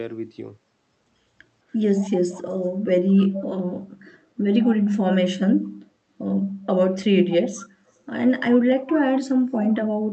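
An echo leak appears at 1.99, 2.32, 3.09, 4.06, 7.57 and 9.54 s. Each is a brief scrap. A copy of the speech returns 211 ms late. It ranges from about 30 dB below the speech to 10 dB below at 9.54 s. A loudspeaker echo canceller likely missed it.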